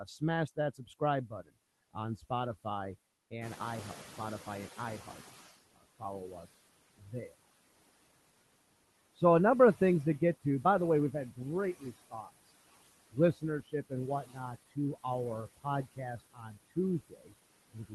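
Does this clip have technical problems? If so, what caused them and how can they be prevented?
Yes. Noise suppressor artifacts run through the whole clip: the suppressor pulls steady noise down by about 19 dB frame by frame, so the background dips between phrases and swells under them. Prevention: use gentler suppression depth or reduce the noise at the microphone.

Speech cut by the noise suppressor occurs from 0.05 to 1.96 s (roughly 0.4 s affected), 5.74 to 7.34 s (about half a second), 11.37 to 12.31 s just after "the way we've had" (a brief 0.15 s or so), and from 13.1 s to the end. Quiet consonants and endings are misjudged as noise and drop by about 16 to 21 dB, sounding swallowed. Prevention: tune the suppressor's speech-presence detection to be less aggressive on low-level speech.

Noise suppressor catching up is audible from 3.41 to 5.55 s. The room noise jumps by about 12 dB near 3.5 s, and the suppressor's noise estimate takes 2.14 s to follow. 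The louder noise passes with only about 15 dB of reduction before it sinks. Prevention: use a faster-adapting noise estimator.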